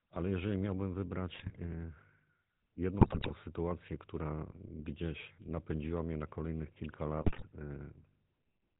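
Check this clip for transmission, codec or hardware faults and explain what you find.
Two faults are present: a GSM full-rate codec colouring the whole speech clip, and three bursts of GSM bit errors.

The GSM full-rate codec runs throughout. The sound fits the 13 kbps full-rate coder, which rebuilds the voice from a vocal-tract filter fed by a sparse, regularly spaced pulse excitation. That gives a plainly audible buzzy, gravelly roughness. On a spectrogram, energy stops at 4 kHz with a flat empty band above, and harmonics look smeared and grainy rather than clean.

GSM bit errors hit three times: 1.34 to 1.58 s, just after "jeżeli miałbym"; 3.00 to 3.31 s, just before "sytuację która"; and 7.22 to 7.44 s, just after "mnie na kolejnych kilka". Corrupted filter, pitch and gain values reach the decoder, so each 20 ms frame can come out with a warped spectrum or a sudden level jump. Each burst is heard as squawks, pops and gargling. 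The waveform shows spiky amplitude jumps, and the spectrogram shows blocky, frame-wide smears of misplaced energy.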